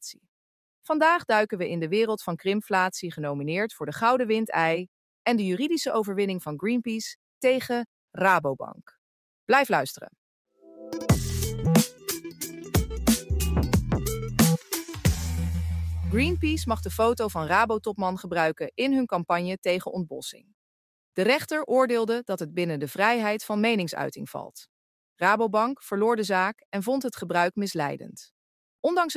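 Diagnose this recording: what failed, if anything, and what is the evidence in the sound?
The call processing stage is where this one went wrong: the sound was cut by the noise suppressor between 20.33 and 20.53 s. For about a fifth of a second the level sinks, by about 18 dB at its deepest, then comes back up. The suppressor seems to have mistaken that stretch for background noise and turned it down harder than everything around it, so the sound drops away before it recovers.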